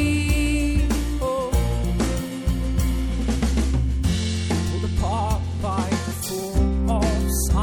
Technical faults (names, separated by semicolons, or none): MP3 compression; corrupt frame decoded